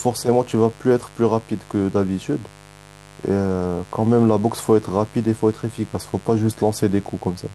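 Mains buzz runs through the whole of this speech recording, sitting roughly 25 dB below the talker as a steady, raspy drone. Its root is 50 Hz, and sharp switching spikes from something like a dimmer, a rectifier or an unshielded cable are getting into the signal path twice in each mains cycle. Those spikes carry a dense ladder of 50 Hz harmonics climbing into the kilohertz range, which gives the buzz its gritty edge rather than a pure hum.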